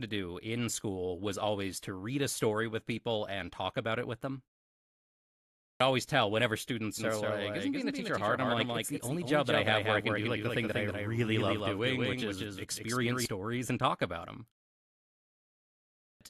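A speech recording with two kinds of fault. Twice the output device dozes off during silence and is slow to wake, so the clipped start after a pause swallows the opening of the next phrase: 0.54 s is lost at 5.26 s after a 0.86 s pause, and 0.58 s at 15.63 s after a 1.19 s pause. From 6.98 to 13.26 s a doubled audio track appears, likely from the audio being captured a second time by a slower path. A dry, full-band copy about 5 dB quieter trails roughly a fifth of a second behind, starting and stopping abruptly.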